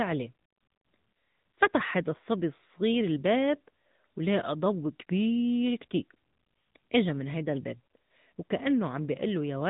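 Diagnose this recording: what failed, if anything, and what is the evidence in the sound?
The codec stage failed: the speech has been through the AMR narrowband mobile codec for the whole clip. The band ends near 3.8 kHz, and the voice has a plainly audible buzzy, synthetic edge. That fits a mid-rate mode around 10.2 kbps, where a pulse-excited vocal-tract model replaces the real waveform.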